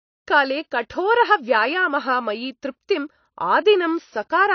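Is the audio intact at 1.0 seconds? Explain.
No. At 1.0 seconds the speech carries AAC compression damage, as it does throughout. Nothing is heard above about 6.5 kHz, so it sounds dull and smeared, with a fizzy edge on sibilants. The likely cause is AAC-LC encoding at roughly 29 kbps.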